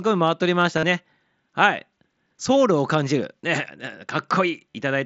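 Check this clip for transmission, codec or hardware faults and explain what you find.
Three short dropouts stand out, all from concealed Bluetooth headset packet loss. They occur at 0.78 to 0.83 s, at 3.41 to 3.43 s, and at about 4.74 s. Audio packets from the headset never reached the phone. The receiver filled each gap by repeating the best-matching stretch of the last few tens of milliseconds. The first gap, about 50 ms long, sounds like a held, buzzy tone with a slight warble as real speech resumes. The later two are shorter. The mSBC link carrying the speech adds only light graininess.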